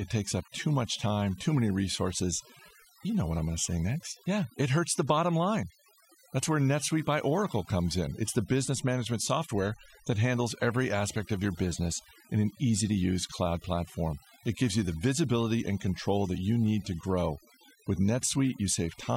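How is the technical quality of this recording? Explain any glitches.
The recording suffers from overdone noise removal, audible from start to finish. A noise reduction stage set far too aggressively is clamping down on individual frequency bands whenever their level sits close to what it judges to be noise. Between phrases the background collapses to near silence with twinkling, glassy specks, and softer parts of the speech are pulled out with it. Unlike a noise gate, which mutes everything at once, this strips bands selectively.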